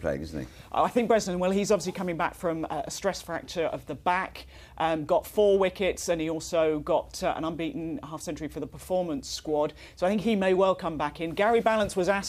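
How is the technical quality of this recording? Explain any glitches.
No technical glitches can be heard anywhere in this recording. There is nothing here that needs explaining.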